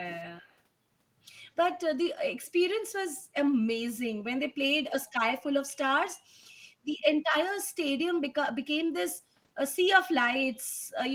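A faint, delayed copy of the speech trails behind it from 0.07 to 0.23 s, again from 0.39 to 0.5 s, and in a brief scrap from 2.42 to 2.47 s. It arrives 140 ms after the original and sits far below it in level. This is an echo leak. The other end was likely playing the call over a loudspeaker, and its echo canceller let part of what its microphone picked up slip through and return.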